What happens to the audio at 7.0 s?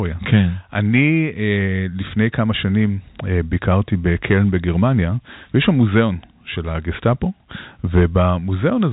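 Nothing goes wrong at 7.0 s: the speech carries on intact through that moment, with only the narrow telephone band of G.711 coding audible, nothing reaching above about 3.8 kHz.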